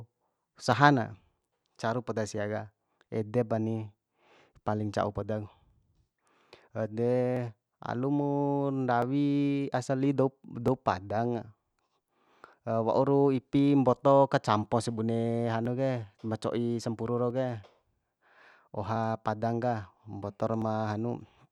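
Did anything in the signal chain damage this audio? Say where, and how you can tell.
Yes. From about 0.73 s to 20.6 s there's a click in the speech every 1.66 s, roughly fifteen in all. That's clock drift buffer slips, likely at the buffer between two devices whose clocks disagree by something like 400 ppm, dropping or repeating a few dozen samples each time.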